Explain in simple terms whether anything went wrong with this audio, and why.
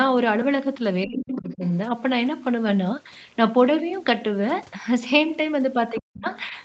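Two things went wrong, both around moments when both sides talked at once.

Speech suppressed in double talk: at 1.06 to 1.62 s and again at 6.0 to 6.26 s the talker's voice dips sharply, almost vanishing the second time. The echo canceller likely mistook it for echo.

Other side's voice leaking through: a fainter second voice slips in at 1.17 to 1.69 s, briefly at 5.96 s, and faintly at 6.26 to 6.44 s, likely because the echo canceller didn't fully remove the loudspeaker sound.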